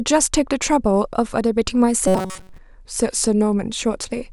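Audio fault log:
2.08 to 2.58 s, robotic sound from repeated short buffers: the speech turns into a stiff, metallic buzz pinned at 188 Hz that still loosely follows the words. This is likely from a tiny chunk of about 5.3 ms being looped while most of the real audio got skipped.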